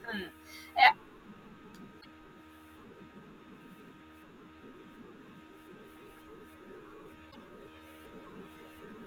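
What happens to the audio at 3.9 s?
Nothing goes wrong at 3.9 s; the speech runs on intact through that moment with no dropout, click or distortion.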